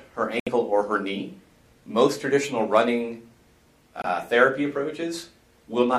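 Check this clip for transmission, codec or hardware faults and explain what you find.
Two brief cutouts are present, consistent with a Bluetooth dropout. From 0.40 to 0.49 s about 70 ms of sound goes missing, which fits roughly three lost packets; from 4.02 to 4.05 s about 23 ms vanishes, suggesting one. The likely cause is packets reaching the headphones too late and being discarded. Output falls silent, then resumes further along as if playback had continued. A waveform shows flat holes; a spectrogram shows blank vertical bands spanning all frequencies.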